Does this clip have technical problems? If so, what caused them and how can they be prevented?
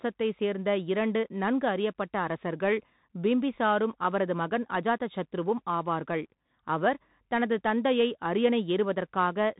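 Yes. The speech passes through a Bluetooth CVSD headset codec throughout. Nothing above 3.8 kHz survives, and the one-bit step-adapting delta coding, consistent with a 64 kbps link, leaves scratchy sibilants over a granular hiss. A wideband headset profile or wired microphone prevents this.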